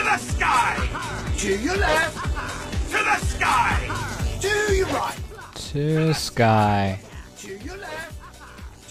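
From 0.0 to 4.0 s the clip shows an adaptive stream starting at a low bitrate. The player began on a low-quality version to start quickly, which sounds like HE-AAC around 16 kbit/s, with nothing above 12.3 kHz and treble that is missing or synthetic, plus stronger codec artefacts. At 4.0 s it steps up to what fits AAC-LC at 96 kbit/s. Unlike a dropout or reconnection, the improvement is sudden but has no gap.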